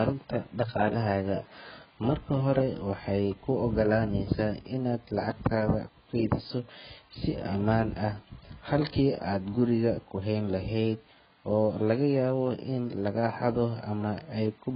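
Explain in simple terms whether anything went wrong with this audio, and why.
The whole speech sounds dull and watery, with nothing above about 5.1 kHz, likely from heavy AAC compression squeezing it into too small a file.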